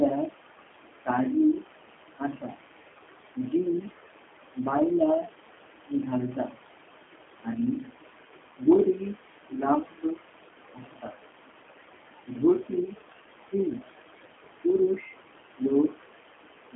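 Right from the start you can hear noise suppressor artifacts. The room noise, sitting about 12 dB under the speech, gets pulled down by roughly 20 dB whenever nobody's talking, then swells back under each phrase.

The whole clip also carries the G.729 codec sound. The band is squeezed to roughly 250 Hz to 3.4 kHz, and the speech has that slightly rough, synthetic edge you get when a low-rate coder rebuilds it from a filter and a few pulses. The damage is plainly audible, which fits an 8 kbit/s G.729A link.

From 12.26 s to the end there's speech cut by the noise suppressor. It mistakes bits of the speech for noise and drops them by up to about 21 dB. That adds up to well under a second in total, and those soft bits sound swallowed.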